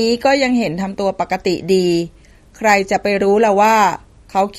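Throughout, the speech carries plainly audible MP3 compression: nothing remains above about 13.8 kHz, and the watery, swirling texture fits a likely low bitrate near 48 kbps.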